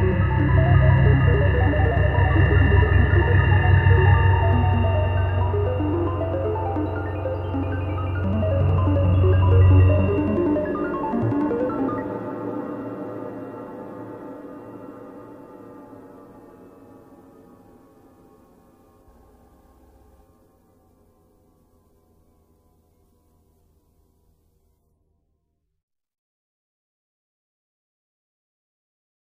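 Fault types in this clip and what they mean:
Nothing stood out on listening to the clip.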